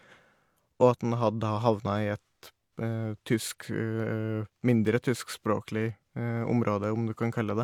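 Nothing stood out on listening to the speech here.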